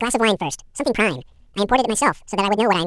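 From the very start, the speech plays at twice its proper speed and a full octave high, about 12 semitones up, so it has that sped-up chipmunk quality the whole way through. It's the classic fault of audio read two samples at a time: the player treats each pair of samples as a single frame, as if the stream were stereo or wider-sample data, so everything runs through in half the time.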